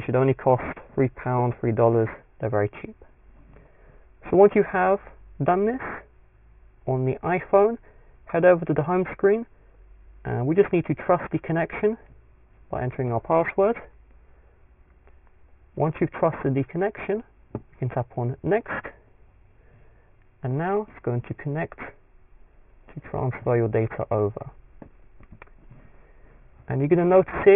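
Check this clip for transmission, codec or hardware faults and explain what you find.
One fault runs through the whole clip: aliasing. The audio was resampled to a much lower rate without an anti-aliasing filter. The fold point sits at 3 kHz, which fits a drop from 48 kHz to 6 kHz. Everything above that point is mirrored back below it as false, unrelated frequencies, roughly 20 dB under the real signal. High content sounds gritty and metallic, and energy crowds right up to the 3 kHz edge. A plain low-pass filter would sound dull but clean. Here the added inharmonic grit and the lack of any roll-off near the band edge mark it as aliasing.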